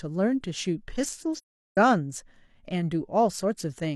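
At 1.35 s the speech drops into a silent gap that lasts until 1.77 s, a case of AAC frame loss with muting. A run of compressed frames never reached the decoder, which fits about nine lost frames, and the decoder filled each missing frame with an all-zero spectrum. Because the transform windows overlap, the sound fades out at the start of the gap and fades back in at the end rather than cutting abruptly.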